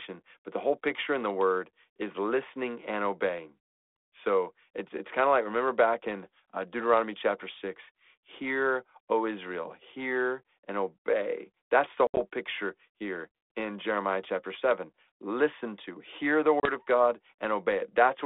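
A speech recording over a G.726 ADPCM line, band-limited to roughly 300 Hz to 3.6 kHz, with packet loss on an ADPCM call. At 12.07 to 12.18 s, just before "picture here in", about 80 ms vanishes, including one hard-edged 70 ms hole. At 16.6 to 16.72 s, after "to hear the", 30 ms drops out. Silence fills each gap. The decoder's predictor and step size then lose sync with the sender's, so the speech resumes with brief distortion.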